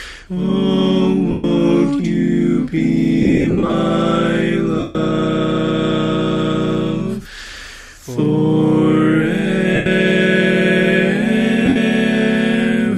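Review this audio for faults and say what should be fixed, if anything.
Lost LE Audio frames at 1.31–1.44, 3.22–3.72 (scattered short gaps), 4.80–4.95, 7.22–7.26, 9.75–9.86 and 11.65–11.76 s: the LC3 decoder concealed missing frames by replaying the last spectrum with random signs, so the sound smears into noisy blur and fades. To prevent this, strengthen the Bluetooth link by reducing distance, avoiding 2.4 GHz interference or raising retransmission margin.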